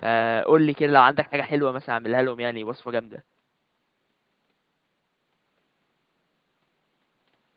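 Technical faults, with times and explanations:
Nothing here needs flagging; the only thing in the background is a bit of room noise sitting about 50 dB below the speech, which is just part of the recording.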